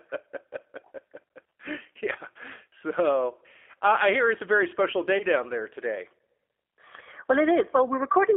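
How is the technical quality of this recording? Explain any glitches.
The technical quality is limited: the speech is coded at a low rate throughout, and there are two brief dropouts.

G.729 codec, throughout: the sound is narrowband, roughly 300 Hz to 3.4 kHz, with the plainly rough, slightly synthetic texture of a low-rate codec consistent with 8 kbit/s G.729. Each 10 ms frame is rebuilt from a vocal tract filter and a few pulses, so speech stays intelligible but loses natural detail.

VoIP packet loss concealed by the speech codec, at 2.70 to 2.72 s and at 5.18 to 5.24 s (between "very special" and "down there today"): the decoder filled each gap, which points to a single lost packet of about 20 ms, by extrapolating from the previous pitch and filter at falling gain. Each gap comes out as a short buzzy or smeared patch, and the voice stays weak briefly afterwards while the decoder recovers.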